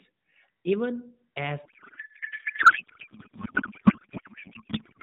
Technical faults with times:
1.66-5.03 codec payload misread

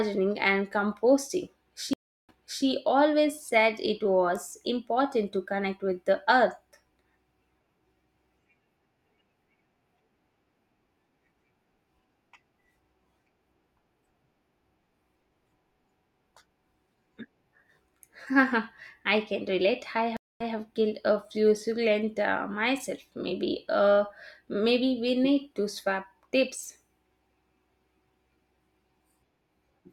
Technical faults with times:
1.93-2.65 stream reconnect
20.17-20.54 stream reconnect

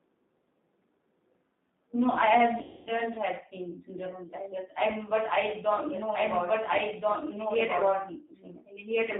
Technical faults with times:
0.00-9.20 G.729 codec
2.63-2.92 VoIP packet loss concealed by the speech codec

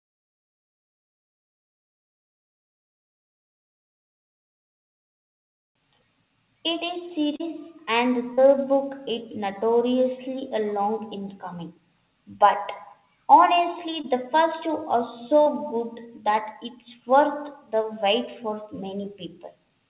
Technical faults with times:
7.36-7.41 short concealed packet loss
8.33-8.39 short concealed packet loss
14.01-14.05 short concealed packet loss
15.41-15.48 burst of packet loss
17.82-17.86 short concealed packet loss

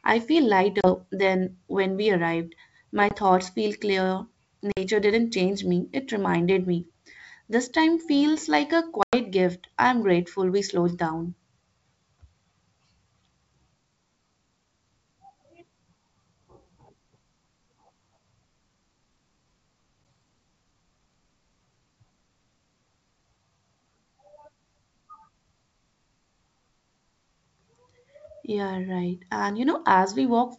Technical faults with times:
0.81-0.89 packet loss on an ADPCM call
3.09-3.15 packet loss on an ADPCM call
4.72-4.78 packet loss on an ADPCM call
9.03-9.16 packet loss on an ADPCM call
20.04 packet loss on an ADPCM call

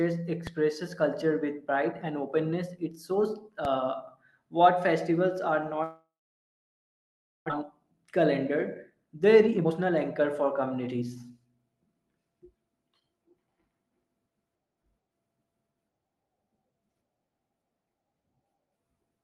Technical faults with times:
0.47 DC step
3.65 DC step
5.83-7.52 long network dropout
7.61-8.08 jitter buffer speed-up
8.90-12.52 jitter buffer speed-up

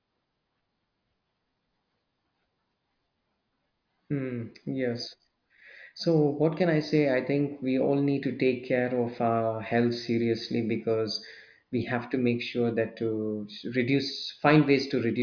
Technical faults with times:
none

